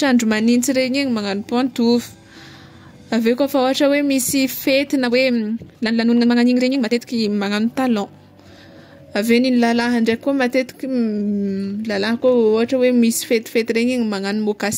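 From 5.03 to 7.27 s, a time-stretched section plays the speech 1.77 times faster at unchanged pitch, sounding rushed, likely squeezed by dropping short pieces.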